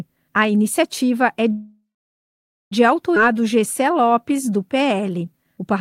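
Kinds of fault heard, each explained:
Call audio freeze: at 1.51 s the last sound smears on, then about 0.87 s of silence follows; 1.2 s is inserted, likely a packet stall, with nothing lost.
Skip ahead: at 3.15 s the audio jumps forward, dropping roughly 0.7 s and butting the two sides together with almost no gap, unlike the freeze's inserted pause.
Jitter buffer slow-down: from 3.24 to 5.74 s repeated pitch periods stretch the sound to 91% speed, adding 235 ms at unchanged pitch, so it drags rather than stops.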